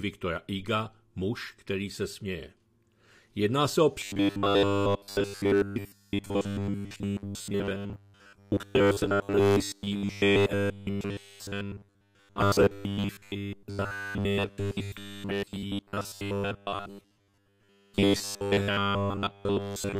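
From 4.0 s to the end, robotic sound from repeated short buffers turns the sound into a rigid metallic buzz at 100 Hz, likely from a 10 ms chunk being replayed while most new audio is skipped. Unlike gaps or clicks, nothing goes silent.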